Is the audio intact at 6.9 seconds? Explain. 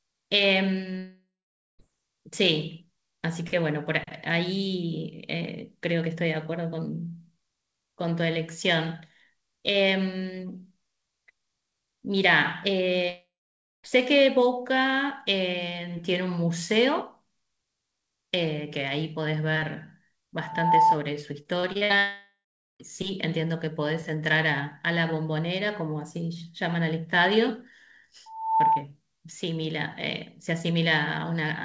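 Yes, the audio is intact at 6.9 seconds, with the speech coming through the call path cleanly and nothing above 8 kHz, as expected from a G.722 codec at 64 kbps.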